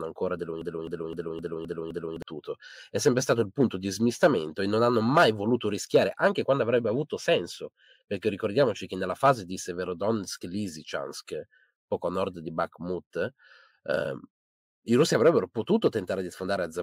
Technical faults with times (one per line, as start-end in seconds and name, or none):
0.61-2.22 broken-record loop